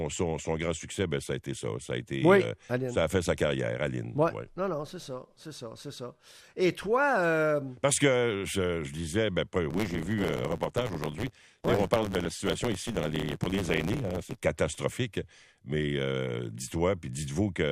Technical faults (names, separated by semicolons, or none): block size mismatch (truncated)